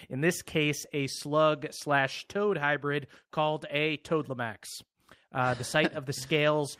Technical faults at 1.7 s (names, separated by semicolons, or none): none